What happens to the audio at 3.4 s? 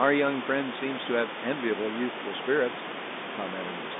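Nothing goes wrong at 3.4 s: the speech passes through intact there, carried as ordinary telephone-band audio over G.711 coding, with the room noise sitting about 10 dB below it.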